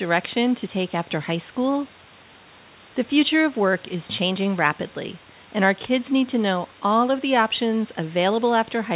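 No technical faults are audible.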